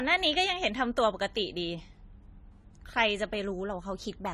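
From start to finish the speech sounds dull and smeared, with a watery, fizzy edge on sibilants and nothing above about 14.1 kHz. The likely cause is AAC compression, with AAC-LC quantising coarsely at a low bitrate that fits roughly 32 kbps.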